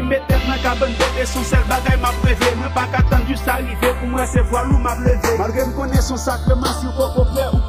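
From start to finish the two channels are drifting apart. They were clearly captured on devices running off separate clocks, roughly 40 ppm out from each other, so the gap between left and right keeps creeping and ends up at around a third of a millisecond. Fold it to mono and the comb-filter notches from that tiny offset glide slowly through the spectrum, which you hear as a slow, sweeping flange over the whole sound.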